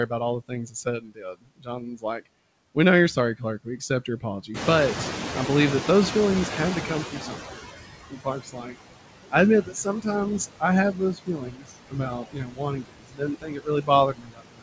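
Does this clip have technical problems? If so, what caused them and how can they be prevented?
Yes. Noise suppressor artifacts run through the whole clip. The steady background is pulled down by about 19 dB between phrases and rises again under the speech. A simple gate would cut all frequencies at once, but this reduction works band by band, so the floor never goes fully silent. Milder suppression settings or a quieter capture room would prevent this.

Speech cut by the noise suppressor occurs at 0.48–2.21, 3.16–4.49, 6.88–7.66, 8.08–8.80 and 9.31–10.07 s, and from 10.39 s to the end. Soft consonants and word endings sink along with the background, by up to about 22 dB. About a second of the first stretch is affected. Here the speech itself drops, not just the noise around it. Less aggressive suppression, or a closer microphone that lifts the speech well above the noise, prevents it.

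Noise suppressor catching up follows a jump of about 16 dB in the room noise at roughly 4.5 s. From 4.54 s the louder noise passes with little reduction while the noise estimate lags, then fades to about 15 dB of cut by 7.62 s, about 3.1 s later. This is a single slow fade, not the continuous artifacts. A faster-adapting noise estimate, or avoiding sudden noise changes near the microphone, prevents it.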